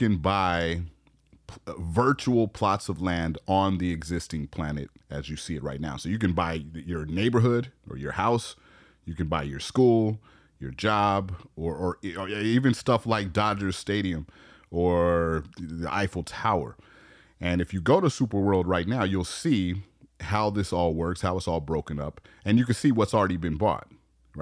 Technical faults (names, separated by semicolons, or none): none